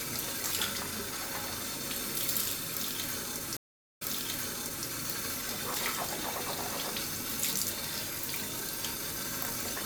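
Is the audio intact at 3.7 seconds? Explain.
No. At 3.7 seconds the audio is inside a stream reconnect that runs from 3.57 to 4.87 s. The connection broke, playback falls silent for 387 ms, and a fresh decoder starts mid-stream, its first frame or two muted or fading in. The server resent a burst, so the sound resumes 0.91 s earlier and repeats what was just heard. A plain dropout would pick up where it stopped, not replay material.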